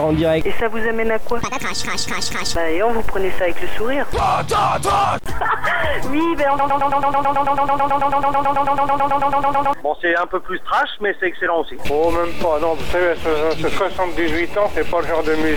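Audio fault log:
6.59–9.73 s, broken-record loop: a tiny slice of sound, about 0.11 s long, gets replayed back to back 29 times, so for roughly three seconds you hear a fast stutter instead of the audio moving on. It's the exact same fragment every time, which most likely means the player or stream stalled and kept pushing out the last bit it had buffered. Whatever should have played in that stretch is simply gone.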